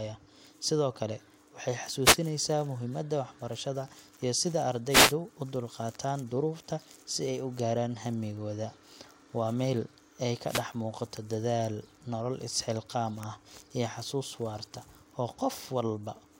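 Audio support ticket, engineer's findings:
Wireless microphone noise hits: FM radio link fading as reflections cancel, receiver noise surging through the speech as brief static bursts at 2.03–2.17 s, 4.89–5.14 s, 10.46–10.64 s.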